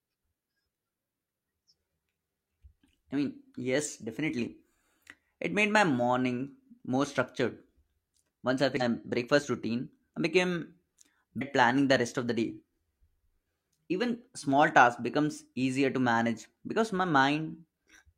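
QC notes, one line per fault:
8.77–8.82 s, damaged data in a compressed stream: a 50 ms glitch cuts into the speech where corrupted bytes reached the decoder, which misread those frames and lost sync until it found the next valid frame header.
11.37–11.43 s, damaged data in a compressed stream: the same fault recurs as a 56 ms glitch just before "planning the rest of", again from frames decoded out of bad data.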